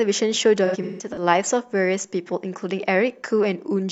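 Between 0.65 and 1.23 s there's AAC frame loss with concealment. About 300 ms goes missing in patches, which fits roughly seven lost frames. The decoder refills the gaps from the last good spectrum, so the speech smears and turns phasey; the longest gap runs around 150 ms.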